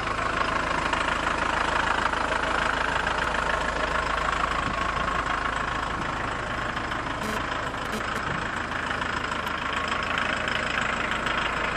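From 7.23 s to 8.18 s a hard, raspy buzz rich in harmonics cuts in at about 5 dB below the sound itself, pulsing at 216.7 Hz. This is GSM phone buzz: a nearby 2G phone sending data in bursts, which the audio circuitry rectified.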